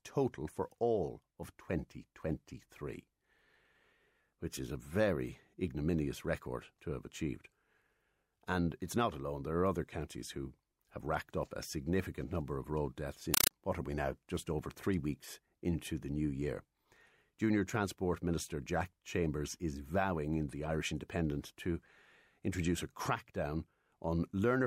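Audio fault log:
13.34–13.51 s, compressed stream played as audio: between "number of road deaths" and "what are we now", undecoded Dolby Digital data plays as loud chattering static. The waveform shows 5.33 ms noise bursts separated by flat zero padding, 31 per second. The spectrogram shows broadband vertical stripes.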